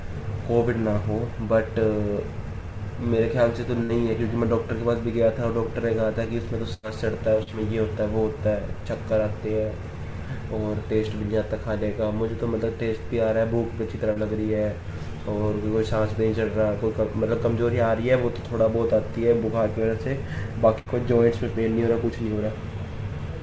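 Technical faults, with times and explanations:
3.83–3.92 s, 6.74–6.86 s and 20.79–20.89 s, burst of packet loss: each time the sound stops moving forward and turns into a held, fading tone or hiss, then picks up a little further along with a piece skipped. A run of packets arrived too late or not at all, so the receiver kept extending the last sound while lowering it. It bridged about 60 ms, 91 ms and 72 ms, and about 60 ms, 90 ms and 60 ms of audio never returned.
7.43–7.50 s and 14.13–14.19 s, short concealed packet loss: a brief smear or wobble, shorter than the bursts, where a quick sound can disappear. About 30 ms of audio missed the decoder each time, and the receiver patched the hole for 37 ms and 30 ms by extrapolating from what came just before, then crossfaded back into the real stream. The concealment runs over a band that stops at 8 kHz, which fits a 64 kbit/s G.722 call.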